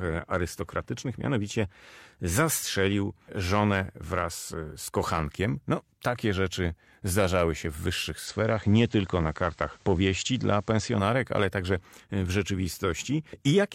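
Speech. From 8.18 to 11.04 s, between "rzeczy zdarzały się w" and "ale także e w", the sound turns faintly hissy. This is digital radio blending to analogue: a 108 ms cross-fade to the FM broadcast and back.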